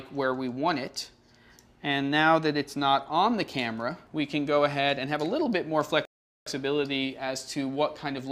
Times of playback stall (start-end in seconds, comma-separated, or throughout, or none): 6.05-6.46